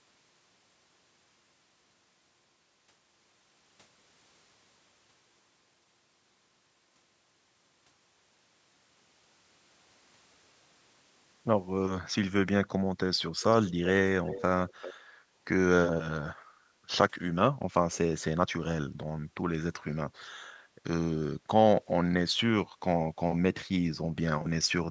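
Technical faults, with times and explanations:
13.65–13.9 s, 14.24–14.42 s and 14.68–14.94 s, echo leak: faint delayed copies of the speech come back about 0.39 s late, roughly 10 to 15 dB below it. This is likely a loudspeaker's sound reaching the far microphone and slipping past an incomplete echo canceller.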